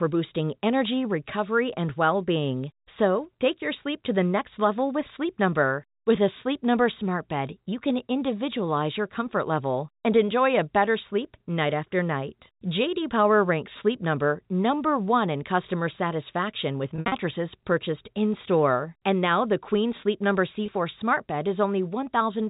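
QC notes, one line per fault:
16.96–17.12 s, packet loss with pitch repetition: about 120 ms of audio went missing in pieces spread over 160 ms, which fits six 20 ms packets. The longest gap was 60 ms. Each gap was filled by repeating the last pitch period, so right after "in customer satisfaction with" the sound briefly holds and turns buzzy.
20.66–20.68 s, packet loss with pitch repetition: a single 20 ms drop, concealed the same way, leaves a brief buzzy hold just before "smart bed". The telephone band of the G.711 A-law path stays audible around it.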